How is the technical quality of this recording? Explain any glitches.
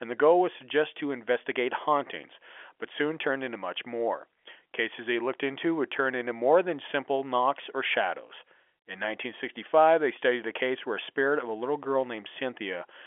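No glitches to explain, just ordinary telephone audio whose G.711 coding keeps everything inside the phone band, so nothing reaches past 3.7 kHz, which is simply how a phone line sounds.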